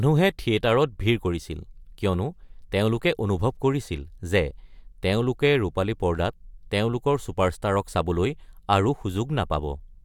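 A short speech recording with no technical fault to report. Nothing heard in it calls for a time, a value or a cause.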